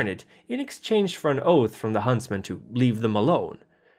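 No technical faults are audible anywhere in the speech.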